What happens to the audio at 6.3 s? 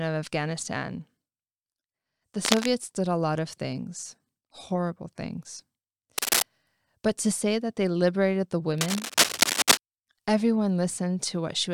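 A burst of cable scratch noise runs from 6.18 to 6.42 s, rising somewhat above the speech as a harsh rustle, likely from a worn connector or cable flexing and jittering its contact resistance. The waveform shows dense, ragged spikes; the spectrogram shows broadband vertical streaks.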